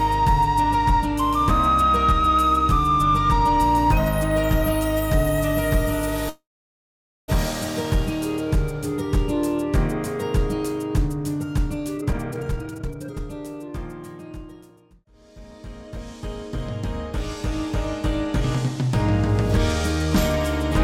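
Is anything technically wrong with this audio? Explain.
Yes. From 6.29 to 7.30 s there is a call audio freeze, likely from packets held up in transit so the jitter buffer ran dry. The receiver stretched the last sound into a fading tail, then about 0.84 s of silence, before resuming with nothing lost.

Two jitter buffer speed-ups follow. After delayed audio arrived together, the buffer trimmed short pitch-period pieces to cut its backlog. From 11.97 to 13.20 s the sound runs at 168% speed, dropping roughly 0.7 s, and is audibly rushed. From 13.68 to 15.97 s it runs at 105%, dropping roughly 0.1 s, and is only slightly hurried. The pitch stays the same in both.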